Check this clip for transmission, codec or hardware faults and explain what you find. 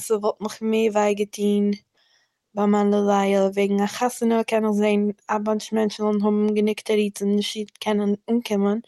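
No transmission, codec or hardware faults can be heard in the speech. It has come through a call path whose coding noise and top end stopping around 12 kHz fit a working Opus codec at about 40 kbps.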